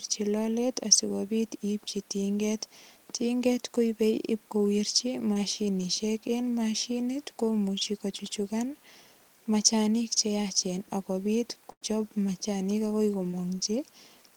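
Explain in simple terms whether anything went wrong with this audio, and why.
Twice, a sliver of the call arrived too late to be played, a case of short concealed packet loss. The receiver patched each hole by carrying on the previous sound for a few hundredths of a second. This leaves a brief smear just after "koipei ipkowirchi" at 5.33 s, and again after "machanik agoi" at 13.31 s.

At 11.71 s, right after "che yaachen ak kopit", a burst of packet loss dropped about a tenth of a second in a row. The receiver stretched the last sound into a short fading buzz or hiss until 11.83 s. The speech then jumps ahead to "machanik agoi", and the part in between is gone.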